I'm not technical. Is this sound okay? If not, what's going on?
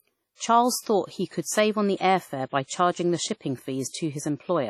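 No. Throughout, the speech sounds ringing and washy, with hiss that swells alongside the voice and no sound above 14.4 kHz, likely from heavy WMA compression.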